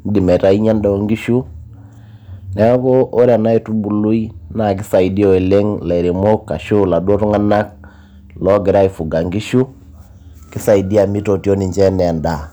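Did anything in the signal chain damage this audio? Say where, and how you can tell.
Yes: hard clipping runs through the whole speech clip, from a stage with a fixed ceiling such as the converter or a fixed-point format conversion. The signal arrives about 3 dB too hot, so roughly one percent of samples hit the limit and their peaks are sheared flat. You hear brief crackle on loud syllables, not constant fuzz. Unlike a limiter or compressor, which rounds peaks smoothly, these flat tops add sharp high harmonics exactly at each peak.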